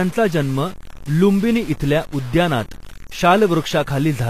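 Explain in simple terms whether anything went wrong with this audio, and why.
Yes, two things went wrong, and both last the whole clip.

The audio was likely stored with too few steps of loudness, cut down to something like 6 bits and truncated without dither. Loudness gets forced onto a coarse staircase, so the speech carries a grainy, gritty roughness that follows the voice and is worst in the quiet parts.

The audio was also likely squeezed hard with HE-AAC compression, which keeps the lower sound and fakes the treble by copying it upward. Nothing remains above about 15 kHz, and the s sounds come out plainly metallic and lispy.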